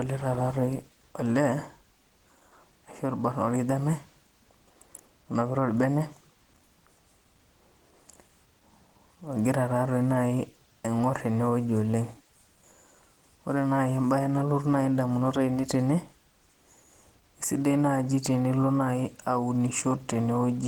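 Throughout, the speech sounds hoarse and grainy, though its bandwidth still reaches 20.2 kHz. The likely cause is Opus compression in hybrid mode, at a rate that fits around 16 kbps.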